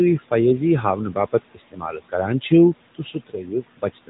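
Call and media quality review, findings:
Noise suppressor artifacts, whole clip: background pulled down by about 16 dB between phrases, pumping back up under speech. Room noise sits about 18 dB below speech, so it's the suppressor gating frame by frame, not the room.

AMR narrowband mobile codec, throughout: clearly buzzy, synthetic speech with nothing above 3.8 kHz. Pulse-driven vocal-tract model; the damage level points to a higher-rate mode around 10 kbps. Classic 2G/3G mobile leg.

Speech cut by the noise suppressor, 2.95 s to the end: parts of the speech sound swallowed, dipping by up to about 18 dB, roughly 0.4 s affected in total. Suppressor misreading quiet speech as noise and turning it down with the background.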